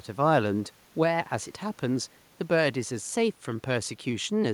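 Speech recording with no audible technical faults.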